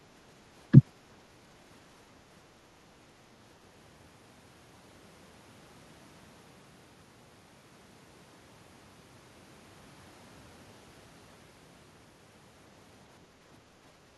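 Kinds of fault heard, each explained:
No technical faults can be heard anywhere in this speech.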